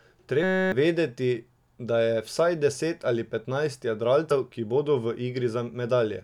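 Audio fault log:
0.43–0.72 s, system hang loop: the speech freezes into a steady buzz at 188 Hz. A 5.33 ms slice, which fits a 256-sample buffer, gets replayed 54 times while the system stalls, so about 300 ms of real audio never arrives.
4.30 s, compressed frames skipped: right after "vsaj deset ali petnajst" and before "ki bodo" the audio jumps ahead roughly three 26.1 ms frames, losing about 70 ms.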